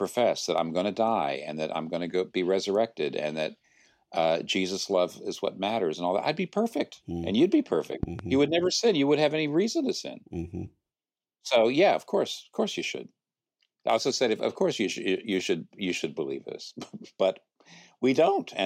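At 8.03 to 8.22 s, two sharp pops in quick succession punch through the speech at about 10 dB above it, while the talking continues underneath. This loud pop is likely a sudden voltage pulse, from a plug, switch, static discharge or driver glitch, added to the signal.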